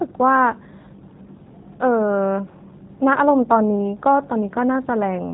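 Speech clip carrying G.729 codec damage throughout: nothing above 3.8 kHz, with plainly rough, synthetic texture from pulse-based excitation, which fits an 8 kbit/s G.729A stream.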